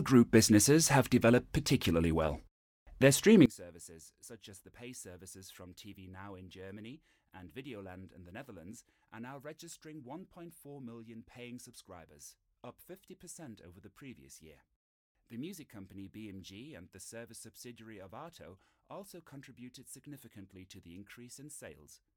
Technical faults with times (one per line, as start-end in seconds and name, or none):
3.46-22.17 one channel inverted